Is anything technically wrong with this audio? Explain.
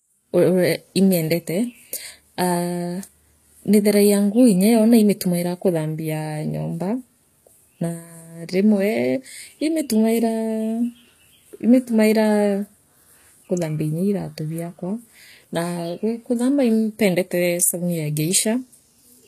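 Yes. Throughout the speech, the treble sounds synthetic, most likely from HE-AAC compression at a low bitrate, around 24 kbps. Upper bands are rebuilt by copying lower ones upward, so harmonics misalign and s sounds turn gritty and lispy. A spectrogram shows smeared, repeated high-band texture ending sharply at 14.9 kHz.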